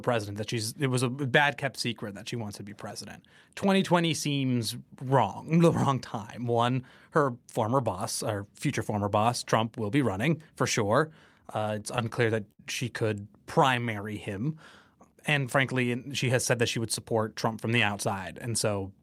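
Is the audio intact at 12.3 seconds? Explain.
No. Late packets kept emptying the jitter buffer, causing repeated stalls (stutter) from 11.47 to 12.61 s. Concealed gaps up to 67 ms make the sound drag and stutter.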